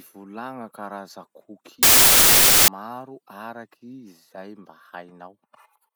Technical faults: samples built from the wrong bytes

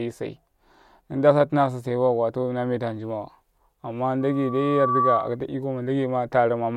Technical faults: loudspeaker feedback squeal

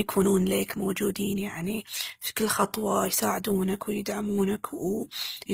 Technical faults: transcoding between lossy codecs

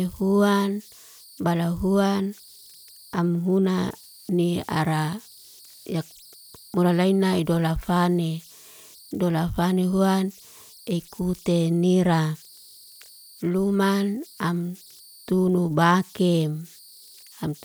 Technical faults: converter idle tones

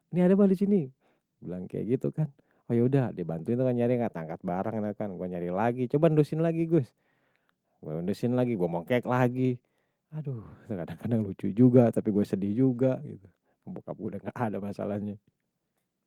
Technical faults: clock drift between sender and receiver; repeated timing corrections

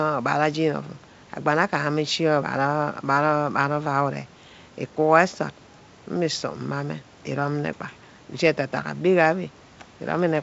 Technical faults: none

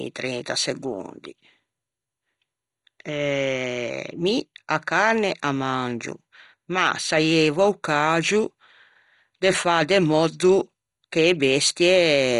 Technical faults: MP2 compression

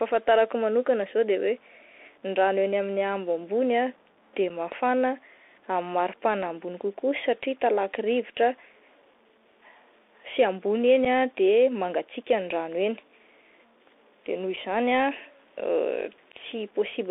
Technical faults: low bit depth without dither; Bluetooth CVSD headset codec; unconcealed Bluetooth headset packet loss

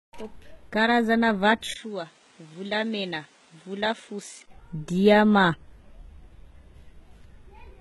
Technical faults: HE-AAC compression; input switched to a poorer device

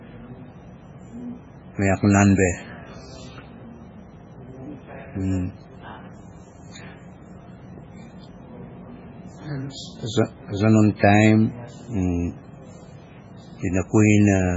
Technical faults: MP3 compression

